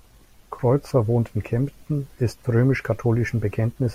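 No technical faults can be heard anywhere in this recording.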